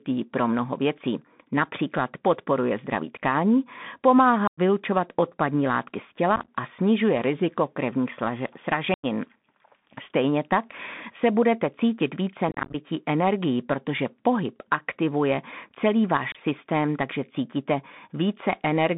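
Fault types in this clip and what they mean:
Bluetooth CVSD headset codec: The whole clip runs through the narrowband Bluetooth headset path. The sound is sent as a stream of single up-or-down bits with a self-adjusting step size, which fits a 64 kbps CVSD link. Everything is squeezed into about 150 Hz to 3.6 kHz, so it comes across thin and phone-like. The damage is plainly audible: s sounds turn scratchy, louder bright moments distort because the step can't keep up, and a grainy hiss sits under the speech the whole way.
Unconcealed Bluetooth headset packet loss: There are five spots where chunks of the headset stream never arrived and silence or an idle pattern was dropped in, with abrupt edges. Solid gaps of about 0.1 s land at 4.47 s, just before "odpadní látky z", and at 8.94 s. Around 6.36 s, and from 12.49 s between "se budete cítit více" and "energií protože pohyb aktivuje", the losses are scattered, so the speech sounds chopped and crackly for about 0.12 s and 0.25 s. 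A short 26 ms dropout hits at 16.32 s, before "systém takže cítíte".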